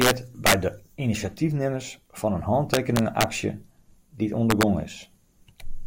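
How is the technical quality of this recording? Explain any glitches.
The recording has integer overflow in four places: 0.01–0.11 s (about 3 dB over), 0.46–0.54 s (about 5 dB), 2.74–3.24 s (about 4 dB) and 4.50–4.63 s (about 2 dB). In these loud passages of speech, the signal exceeded the largest integer the format can hold and, instead of being limited, wrapped round to the opposite extreme. Each peak flips across the full range, producing harsh, violent cracks far sharper than ordinary clipping.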